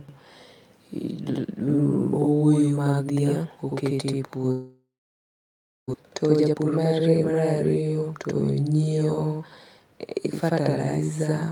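Channel delay (doubling) runs throughout: one channel arrives about 85 ms late, which fits a 4096-sample buffer, so the mono sum carries an equal-level slap echo behind every syllable.

A long network dropout, likely the cause, occurs from 4.51 to 5.96 s, right after "oketo e". The last sound is stretched into a fading buzz, then about a second of silence follows, and the audio resumes with roughly a second of speech missing.

A jitter buffer speed-up follows from 6.03 to 7.83 s. Tiny pitch-period slices, around 0.4 s in total, are removed to cut the built-up delay. The speech runs about 20% faster at unchanged pitch and sounds hurried.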